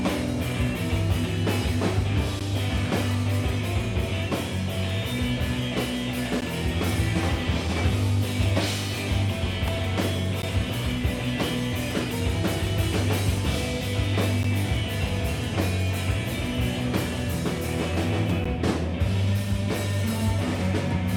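Gaps between chunks appear at 2.40 and 6.41 s: 12 ms holes, where the audio was delivered in 4 s chunks and silence was left at each join. Unlike a dropout, nothing is missing; the sound resumes exactly where it stopped. At 9.68 s an electrical switching spike adds a sharp snap or tight cluster of clicks on top of the sound, likely a nearby switch or static discharge arcing into the line. Unlike the gaps, it interrupts nothing and comes only once. Further chunk gaps follow at 10.42, 14.43 and 18.44 s, keeping the same 4 s rhythm.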